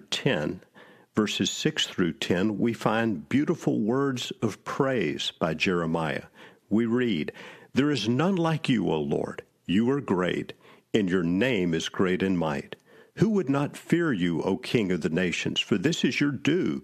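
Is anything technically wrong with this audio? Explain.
No, no technical faults.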